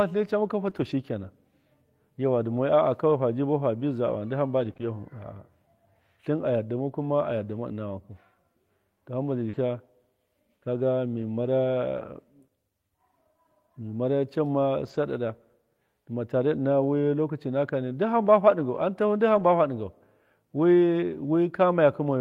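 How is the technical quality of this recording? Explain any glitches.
The speech in this recording is interrupted by several network-related glitches: brief concealed dropouts early on and near 9.5 s, and a few rough patches where lost audio was rebuilt from backup data.

Scattered short gaps, 0.69 to 4.87 s: across this stretch about three tiny pieces of audio, none longer than about 20 ms, failed to arrive in time. Each time, the receiver papered over the hole by extending the sound just before it. Only about 1 percent of the stretch is affected, so it stays clear apart from fleeting ticks or small hiccups.

Short concealed packet loss, 9.49 to 9.55 s: here 40 ms of audio never reached the decoder. The receiver synthesised a continuation of the preceding sound, following its pitch where voiced or shaping noise where not, then faded back into the real signal. This is heard as a quick smear or wobble, and a brief consonant could drop out entirely.

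Lost packet rebuilt from error correction at 9.53 to 9.55 s (20 ms), 11.17 to 11.27 s (60 ms), 14.85 to 14.99 s (80 ms) and 19.35 to 19.45 s (60 ms): the pattern points to one or a few packets missing each time. The following packets carried low-bitrate copies, and the decoder played those, so there's no silence. Instead these moments sound briefly coarser and noisier.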